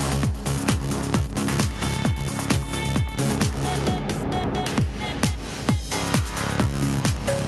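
No technical faults are audible.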